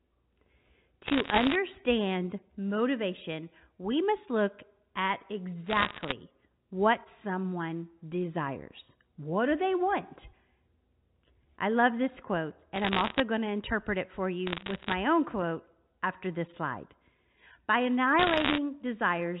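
Bit errors on a digital phone line corrupted the 8-bit samples of a G.711 mu-law call in short bursts at a rate of around one percent. Each flipped high bit, or flipped sign on a loud sample, turns a single sample into a sharp tick, and the ticks cluster into crackle over the speech. The bursts fall at 1.06–1.55 s, 5.66–6.12 s (between "we must look at" and "what someone desires"), 12.76–13.2 s (after "I love this quote"), 14.47–14.94 s (after "to interpret it for"), and 18.19–18.58 s, where the crackle is slightly denser.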